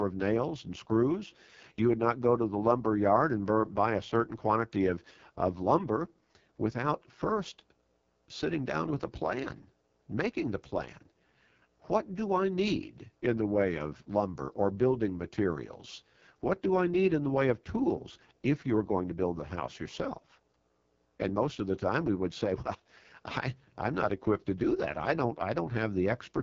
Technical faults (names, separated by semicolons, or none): AMR wideband (HD Voice) codec